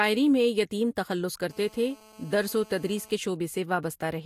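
Right after "میں یتیم تخلص", at 1.51 s, a GSM phone buzz appears and runs until 3.11 s. A 2G phone in a call sits close to the recording chain. Its radio bursts repeat at 217 Hz, and the audio circuitry rectifies them into sound. The result is a hard, raspy buzz rich in harmonics, about 26 dB below the speech. It stays nearly steady, with no link to what is being said.

At 3.12 s the steady buzz gives way to GSM signalling bursts, lasting until 3.84 s. The same phone is still in the call, but its user has gone quiet. It now transmits only short groups of bursts. These are rectified the same way. They are heard as even ticks with a longer buzz twice a second. The level is much lower, roughly 35 dB under the speech.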